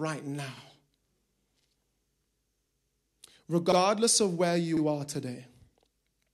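It's a speech clip with overlapping chunks: at 0.57, 1.62, 3.72 (just before "of where") and 4.77 s (between "of where" and "are today"), about 50 ms replays, giving a stutter. The audio was handled in 1-second blocks, each restarting slightly before the previous one ended.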